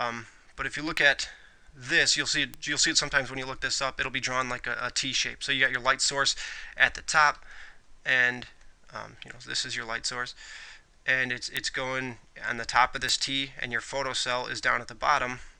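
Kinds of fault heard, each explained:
Bit error spike: flipped bits in single samples or runs of two or three jump the waveform by a power of two, giving sharp broadband ticks at 0.97, 2.54, 11.57 and 13.09 s, peaking around -13 dBFS, about -7 dBFS at 11.57 s.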